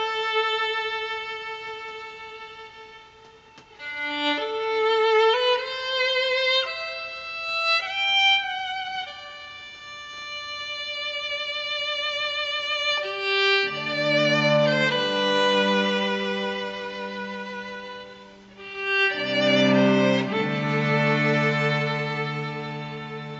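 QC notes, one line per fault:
Nothing stood out on listening.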